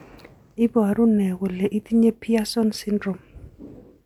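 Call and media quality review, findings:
No call or media quality findings in this clip.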